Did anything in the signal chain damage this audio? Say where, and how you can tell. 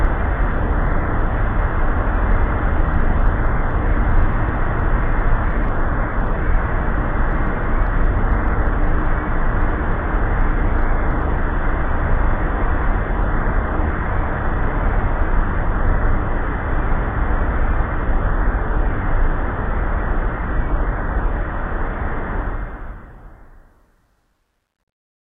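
Yes. There is truncation distortion on the fade from 22.38 s to the end at 25.29 s, worst from 23.56 s onward. The fade-out itself starts at 22.38 s, and as the level drops, the tail turns gritty. This points to a volume or sample-format conversion stage that kept too few bits, consistent with about 11, and added no dither. The quietest part of the waveform collapses into coarse square steps.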